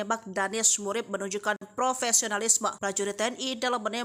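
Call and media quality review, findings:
Gap between stream segments, 1.56 to 1.62 s: hard-edged silent hole of about 50 ms at a segment boundary. Timestamp mismatch, with the player padding silence. Unlike a packet dropout, nothing is missing. Sound resumes exactly where it stopped, just delayed.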